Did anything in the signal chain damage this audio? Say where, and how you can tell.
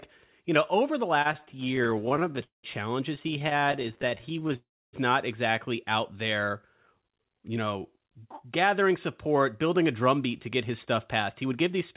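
Yes. From 1.22 to 2.65 s, right after "you know over the", the speech drags and stutters with repeated stalls, the longest about 0.2 s and roughly a third of the span filled in. From 3.15 to 4.56 s the stalls are shorter, the longest about 16 ms. This is a network and jitter-buffer fault: packets arrived late, the buffer kept running dry, and the receiver stretched the last sound each time. Nothing is lost.

At 4.56 s the audio freezes for about 0.37 s, most of it (0.29 s) silent, then resumes where it stopped. This is a call audio freeze, likely caused by packets held up in transit until the jitter buffer emptied, with the receiver fading its filler to silence.

From 7.22 to 11.78 s, after "out there", the speech sounds hurried at an unchanged pitch, running about 6% fast. This is a jitter buffer speed-up. The receiver, holding too much queued audio, trimmed pitch-period slices to cut about 0.3 s of delay. 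All of this rides on a narrowband G.711 call path, with nothing above 4 kHz.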